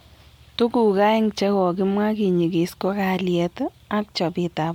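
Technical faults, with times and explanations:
Throughout, generation loss: the speech sounds swirly, smeared and hollow, with consonant attacks blurred, more than a single moderate-rate encode would leave, though content still reaches about 20.1 kHz. The likely cause is repeated lossy coding, about five passes, consistent with an MP3 chain at 128 kbit/s. Each decode and re-encode quantises again on a shifted frame grid, so quantisation noise and spectral holes build up from pass to pass.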